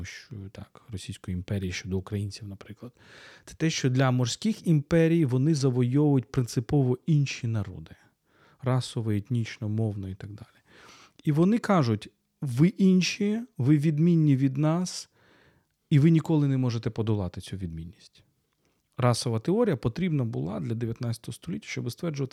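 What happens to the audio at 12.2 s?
Nothing goes wrong at 12.2 s; the speech carries on intact through that moment with no dropout, click or distortion.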